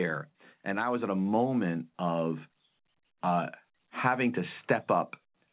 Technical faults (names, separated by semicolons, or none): automatic gain rising